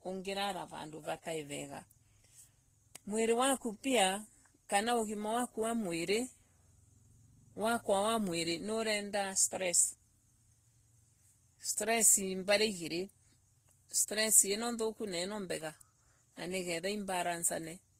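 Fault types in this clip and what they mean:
Transcoding between lossy codecs: the speech was likely encoded by one lossy codec and re-encoded by another, which fits a low-rate Vorbis stage followed by Opus. The second encoder spends bits on the first one's smearing and adds its own, so both artefacts blend, and nothing survives above 15.7 kHz.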